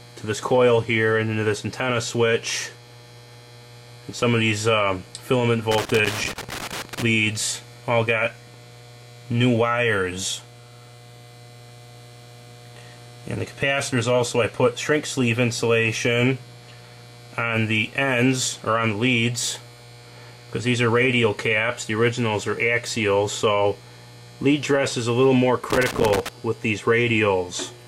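Loose connector crackle breaks up the audio from 5.71 to 7.02 s and again from 25.70 to 26.29 s, first for about 1.3 s and then for about 0.6 s. Each burst is an irregular scratching crackle with the signal chopping in and out, the sound of a worn or dirty contact making and breaking as the plug or lead shifts, so the path opens and closes faster than the ear can follow.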